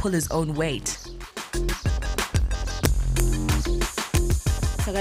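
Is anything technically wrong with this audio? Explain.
Yes. Integer overflow occurs at 2.19 to 2.36 s, 2.85 to 3.52 s and 4.15 to 4.32 s. Loud peaks are pushed about 1 dB past the integer limit. Instead of being capped, they wrap to the opposite sign. Each one becomes a violent crack, sharper than clipping.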